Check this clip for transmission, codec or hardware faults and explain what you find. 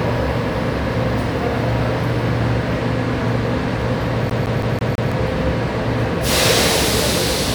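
One fault is present: the CD is stuck on one turn. From 4.30 s to 5.12 s, a scratch keeps knocking the laser back one track at the same point on each rotation. The same 164 ms slice of sound therefore plays five times in a row. A brief mute falls at each jump back. The result is a fast, even stutter, the familiar sound of a skipping CD.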